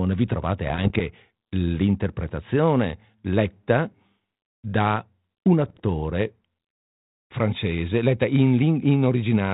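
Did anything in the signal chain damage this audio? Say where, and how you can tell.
Yes. Bit errors on an ADPCM link, at 0.64–1.03 s (before "l'interpretazione letta") and at 5.64–5.80 s (after "da un"), cause pops and rough bursts. Each flipped bit throws off the decoder's step size and predictor, so the disturbance rings on briefly.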